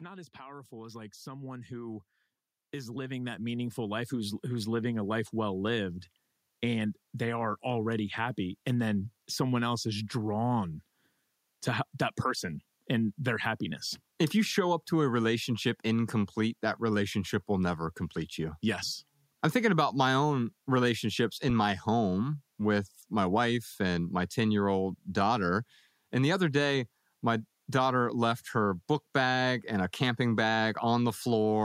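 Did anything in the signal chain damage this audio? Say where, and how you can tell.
Yes. Automatic gain rising appears from 0.36 to 5.29 s, in the call-processing stage. Over those five seconds the level climbs by about 18 dB, and the speech and the background noise rise together. That shared swell is the giveaway: a talker getting louder would not lift the room noise too. The automatic gain control judged the input too quiet and kept raising its gain step by step until it settled.

A phantom power thump occurs at 21.5 to 21.74 s, in the analogue wiring at the microphone input. It is a deep, low-frequency thud that dies away with a decay of about 53 ms. Switching the supply on a live input drives a sudden DC step through the coupling capacitors, and that step reaches the converter as a single pulse.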